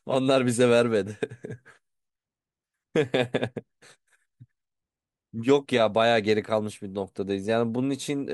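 No technical faults are audible.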